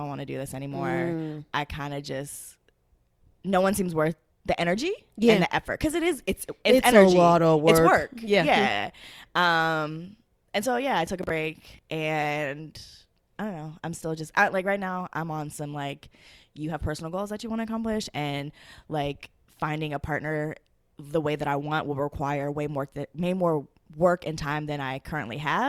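From 11.07 to 11.79 s, just after "and so yeah I", a gritty tearing crackle rides over the speech. This is processor overload crackle: the processor missed several buffer deadlines in a row, and each miss replayed a hard-edged scrap of old audio, fitting buffers of around 5 ms.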